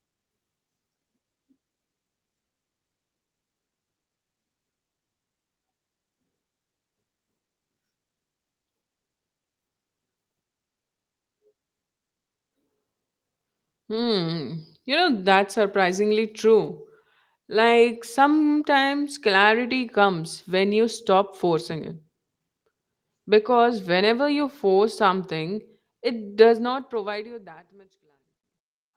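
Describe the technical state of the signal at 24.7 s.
At 24.69 s, right after "because whenever you" and just before "something it does", there's a lost packet rebuilt from error correction. The next packet carried a low-bitrate backup copy of the missing audio, and the decoder played that instead, so there's no gap. That brief stretch, about 20 ms, which fits a single lost packet, comes out rough and noisy.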